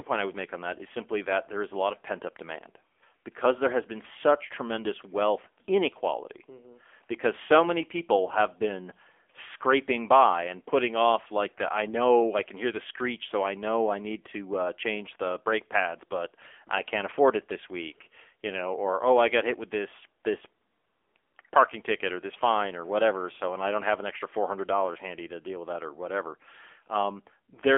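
AMR narrowband mobile codec throughout: speech is confined to a 300 Hz–3.4 kHz phone band with nothing above 3.5 kHz, buzzy and synthetic, fitting a low mode near 8 kbps.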